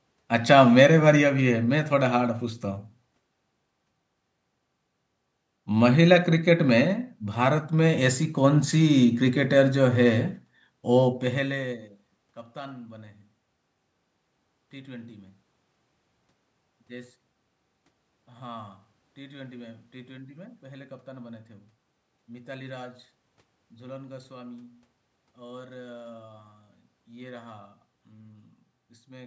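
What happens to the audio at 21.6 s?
Nothing goes wrong at 21.6 s; the speech carries on intact through that moment with no dropout, glitch or distortion.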